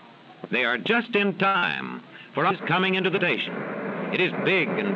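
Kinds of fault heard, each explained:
Short stall from a late packet: at 1.48 to 1.56 s a packet arrived late, the jitter buffer ran dry and the receiver held the last sound for about 62 ms before resuming from the same point, so nothing is lost but the sound is stretched and the delay grows by 62 ms.
Short concealed packet loss: at 1.58 to 1.64 s about 40 ms of audio never reached the decoder, and the receiver covered the gap with about 43 ms of extrapolated sound, carried on from the preceding signal and then blended back into the real audio, heard as a brief smear.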